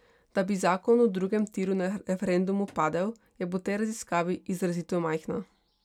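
No technical faults can be heard anywhere in this speech recording.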